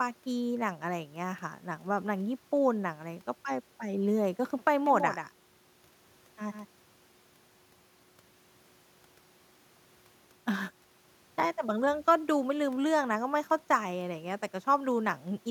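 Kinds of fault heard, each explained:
Doubled audio track: from 4.86 to 6.66 s a dry, full-band copy of the speech runs roughly 150 ms behind and about 10 dB quieter, likely from a slower second capture path. Spectrograms show each pattern faintly repeated, and the waveform shows abrupt copy edges.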